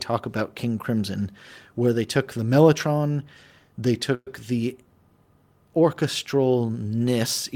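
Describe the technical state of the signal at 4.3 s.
Right at 4.3 s the speech is coming out of a call audio freeze that runs from 4.14 to 4.28 s, just after "took the mellotron they". The last sound is drawn out as a fading buzz or hiss for about 120 ms, including roughly 50 ms of silence, and the speech then resumes exactly where it stopped, now about 120 ms late. The likely cause is held-up packets draining the jitter buffer. Unlike a packet-loss dropout, nothing is skipped: a pause is inserted and the timing shifts.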